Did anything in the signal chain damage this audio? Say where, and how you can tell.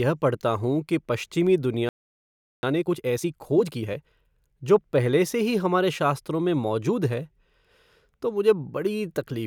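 Yes. At the playback stage, the speech cuts out after "कि पश्चिमी" at 1.89 s and stays silent until 2.63 s, a gap of about 0.74 s. This is a playback stall, likely from the player running dry or its thread being blocked. What separates it from a network dropout is that nothing is lost: the speech picks up exactly where it stopped, rather than jumping ahead or leaving a clipped syllable at the edge.

From 2.63 s to 4.11 s, up to "जो पहले से ही", the speech runs at 1.5 times normal speed while its pitch stays unchanged. This is time-compressed catch-up: the player works off the backlog left by the stall by removing short pieces and cross-fading the joins. It can't be a simple fast playback or a clock mismatch, because either of those would raise the pitch.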